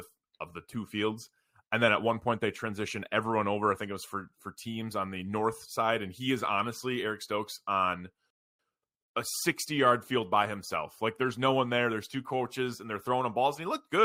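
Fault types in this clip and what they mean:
Rebuffering stall: The player used up its downloaded audio and had to wait for more data. The speech cuts to silence at about 8.30 s. It picks up again at 8.59 s, exactly where it stopped. No speech is skipped or repeated. The pause simply stretches the timeline by about 289 ms.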